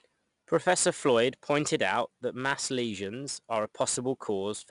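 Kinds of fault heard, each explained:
4-bit ADPCM compression: each sample is stored as a coarse 4-bit step from a predicted value, so the speech carries a gritty hiss that rises and falls with its loudness. The damage is plainly audible, there's nothing above 10.6 kHz, and it fits a rate near 89 kbps.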